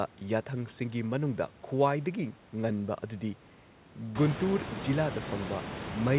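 Speech recording with no technical faults to report.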